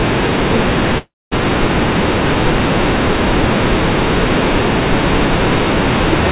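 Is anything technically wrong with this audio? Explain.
Yes. A call audio freeze runs from 0.98 to 1.34 s: late packets likely emptied the jitter buffer, so the last sound trails off into about 230 ms of silence before the speech resumes intact, now roughly 334 ms later. The call path itself carries nothing above 4 kHz, which fits G.711 mu-law at 64 kbps.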